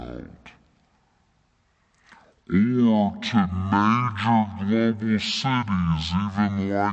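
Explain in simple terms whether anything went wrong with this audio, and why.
Something did go wrong. The whole recording plays at half speed, and the voice sits a full octave lower. This is a wrong sample rate fault. The audio was captured at one rate and played back at half that, which fits 48 kHz audio played at 24 kHz.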